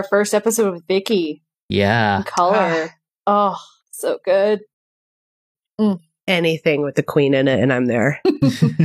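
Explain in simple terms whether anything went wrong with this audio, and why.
Something did go wrong: a rebuffering stall. At 4.74 seconds the speech suddenly falls silent and stays silent until 5.55 seconds, adding about 0.81 seconds of dead air. The player ran out of downloaded audio and had to wait for more to arrive. What sets this apart from a dropout, where a piece of sound goes missing, is that the speech picks up exactly where it stopped, so nothing is skipped. The clip just runs longer.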